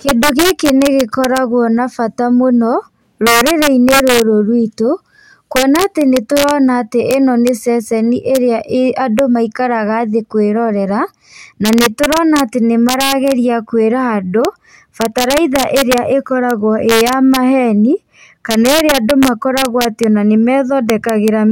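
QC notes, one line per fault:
Throughout, integer overflow: the speech is pushed about 2 dB past full scale, and instead of being limited, the few peaks that cross it (a small fraction, well under one percent) wrap to the opposite extreme, so loud syllables snap with harsh cracks, far sharper than clipping.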